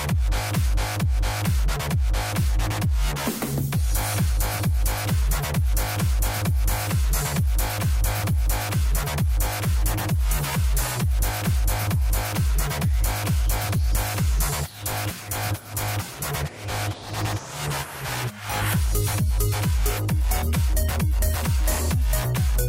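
No technical faults occur anywhere in the audio, so there is nothing to describe in time order.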